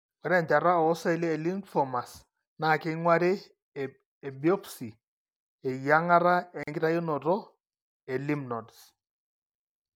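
At 6.63 s a gap at a join of encoded pieces cuts the speech for about 41 ms: separately encoded sections were butted together untrimmed, leaving encoder delay and padding as silence.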